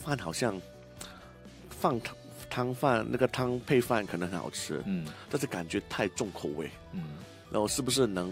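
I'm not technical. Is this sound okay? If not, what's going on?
No. From 2.81 to 6.51 s, a switching power supply is leaking its own noise into the audio, a fault called switching supply whistle. You hear a faint, high whistle, wandering in pitch between about 3.2 and 3.9 kHz.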